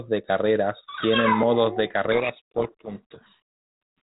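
From 2.12 to 3.4 s, just after "carreras tienen modos de", a codec payload misread buries the speech in harsh distortion. The G.726 code words seem unpacked in reversed bit order.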